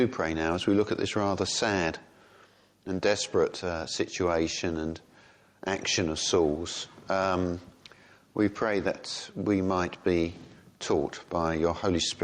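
Gain pumping runs throughout: the gain swings by around 5 dB, likely from fast limiting on excessive gain, unlike a gate's abrupt silence.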